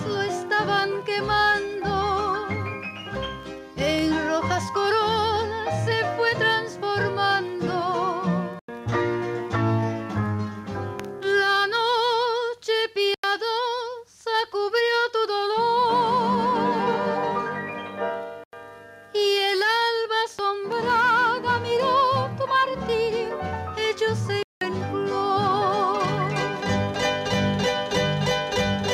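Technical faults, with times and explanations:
Throughout, gain pumping: the level is pulled down a few decibels each time a loud sound arrives, so the level seems to breathe and loud and soft passages sit unnaturally close together. The likely cause is input gain set far too high, with a fast limiter or compressor clamping down on every peak and releasing in between, which squashes the dynamics.
8.59 s, 13.14 s, 18.44 s and 24.43 s, block of digital silence: the audio drops abruptly to dead silence and returns with no fade, leaving a short hole. The first three gaps last about 0.09 s. The last runs to 24.61 s, about 0.19 s, exactly twice as long. Those lengths fit a 4096-sample buffer, and one of 8192 samples, left unfilled and output as zeros.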